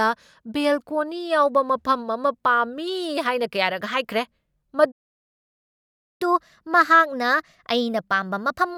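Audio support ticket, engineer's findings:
Playback stall, 4.91 to 6.22 s: speech cuts out mid-flow, roughly 1.3 s of dead silence, then resumes. Likely player buffer underrun or blocked audio thread; output starved until data or the thread returned.

Catch-up at higher speed, 6.22 s onward to clip end: speech runs at 1.1x, pitch raised about one and a half semitones. Player resampling its backlog to recover the time lost in the stall; speed and pitch rise together.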